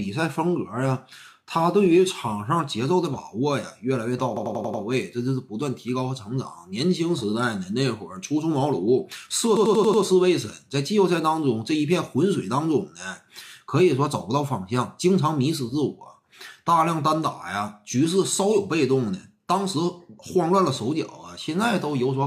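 A system hang loop occurs twice, from 4.37 to 4.83 s and again from 9.57 to 10.03 s. Each time the host or driver stalled while the audio hardware kept replaying its ring buffer. One 92.9 ms slice, which fits a 4096-sample buffer, repeats exactly five times at 10.8 Hz. The result is a rapid machine-gun stutter rather than a buzz. Afterwards the sound resumes with practically nothing missing.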